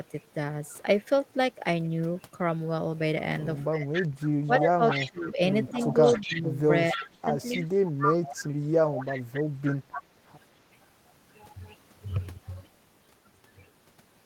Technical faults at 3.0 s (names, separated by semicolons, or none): none